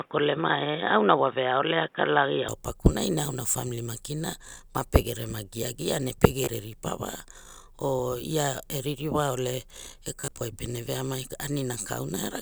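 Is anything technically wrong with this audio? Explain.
Yes. From 0 to 2.48 s the speech is band-limited. Nothing reaches above 3.8 kHz, so it sounds dull and boxy, with a faint extra noise floor. The level holds steady. The likely cause is an input switched to a poorer device, such as a headset's call profile.

There is also Bluetooth stutter. At 6.44 s about 29 ms goes missing, which fits a couple of dropped packets. From 10.21 to 10.41 s about 100 ms is lost in scattered gaps. The receiver replays its last short buffer, giving a brief buzzing repeat before the speech jumps ahead.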